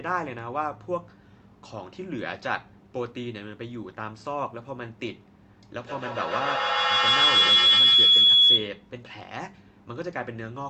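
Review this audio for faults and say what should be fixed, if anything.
Feedback howl from 5.77 to 8.91 s: two devices in the room feed each other, building a whistle near 3 kHz, with the loop repeating roughly every 150 ms, and peaks about 13 dB above the speech. Keep just one device on the call per room, or mute the extra one.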